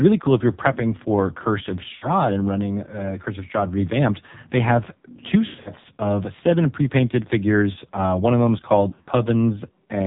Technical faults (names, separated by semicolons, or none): AMR narrowband mobile codec; lost AMR speech frames